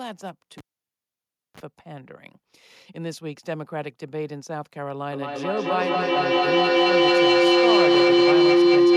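This speech clip has two faults. At 0.58 s a cable is pulled and plugged in. A pop cuts the sound, and near silence follows for about 0.97 s. A 30 ms burst of 50 Hz mains buzz comes as the plug tip makes contact. Another pop at 1.60 s brings the sound back. From 5.12 s to the end there is a feedback howl. A microphone is picking up a loudspeaker on the same call, and each trip round the loop adds level. The tone settles around 400 Hz, with the loop repeating roughly every fifth of a second. It peaks about 11 dB above the speech and never breaks.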